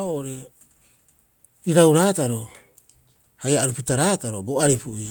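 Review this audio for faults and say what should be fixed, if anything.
Nothing here needs fixing; I couldn't hear any technical faults in the recording.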